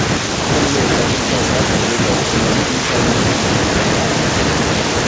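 From the start to 0.49 s, the echo canceller was likely caught in double talk: with both ends speaking at once, it could not separate the near talker from the loudspeaker echo and turned the whole signal down. This is speech suppressed in double talk. For roughly half a second the sound is pushed down hard, at its deepest by around 40 dB, so the speech sinks almost to nothing before recovering.

From 0.55 s to the end, the far side's echo cancellation likely failed to remove what its microphone picked up from its own loudspeaker, and that residue was sent back. This is an echo leak. A second copy of the speech trails the original by about 0.92 s and sits only a few decibels below it. Both the speech and its echo stop at 8 kHz, which fits a wideband G.722 link.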